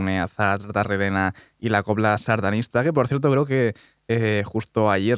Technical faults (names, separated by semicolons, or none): none